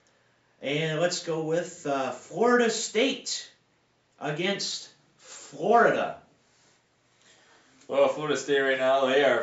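No technical faults can be heard anywhere in the recording; the signal stays steady and intact throughout.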